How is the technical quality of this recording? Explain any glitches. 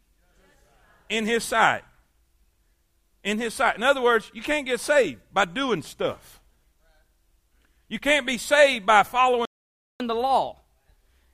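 The recording has two linked playback glitches near its end, a stall followed by sped-up recovery.

Playback stall, 9.45 to 10.0 s: right after "can't be saved by", the audio stops dead for about 0.55 s. The player most likely ran short of data or had its thread blocked, so output fell silent until it recovered. Unlike a packet dropout, which skips material, this is a gap in output while the player catches up.

Catch-up at higher speed, 10.0 to 11.33 s: once playback restarts, the player works through its backlog by resampling at 1.15 times normal speed to win back some of the lost time. Because resampling changes speed and pitch together, the speech sounds both hurried and raised by roughly two semitones. That pairing, and its onset immediately after the silence, separates it from a deliberate pitch shift, which would leave tempo unchanged.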